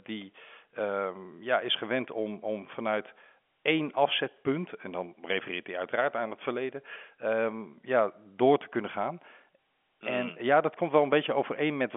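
A speech recording with no technical faults to report. It carries the narrow band of ordinary G.711 telephone coding, with sound confined to roughly 250 Hz to 3.4 kHz as on a 64 kbps fixed line.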